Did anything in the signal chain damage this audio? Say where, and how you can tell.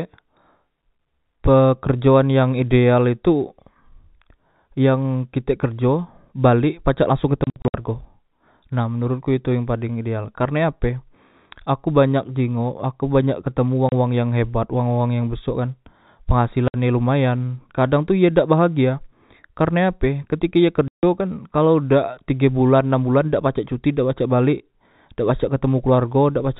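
Yes, at the network stage: packet loss filled with silence. Hard-edged silent gaps appear after "kerjo balek pacak langsong" (7.44–7.74 s, scattered), at 13.89–13.92 s before "wang yang hebat wang", at 16.68–16.74 s, and at 20.88–21.03 s before "kan kalao dak tige". They show as flat waveform holes and blank spectrogram columns, multiples of about 30 ms, which fits lost 30 ms packets replaced by silence.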